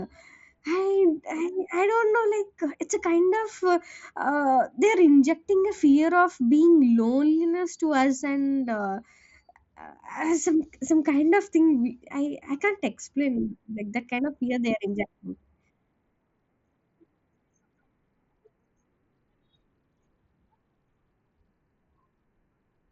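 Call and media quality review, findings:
No findings for the call and media quality review: the speech carries no faults.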